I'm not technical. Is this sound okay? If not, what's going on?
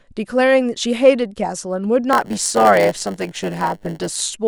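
No. From about 2.12 to 4.20 seconds the speech picks up a steady buzz, a rough hum repeating 100 times a second, and it drags slightly, playing about 8% slower while keeping its normal tone. This is a block size mismatch (padded): one part of the system hands over chunks of audio a little shorter than the next part expects, and the missing bit is filled with silence. Those tiny repeated gaps make the buzz and stretch the timing.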